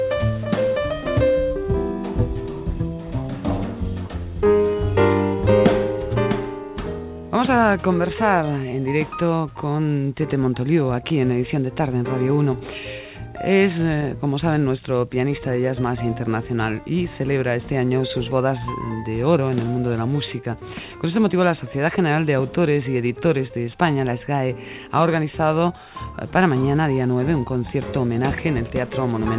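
Nothing stood out on listening; the audio carries the narrow, telephone-like band of the call path, with nothing above about 4 kHz.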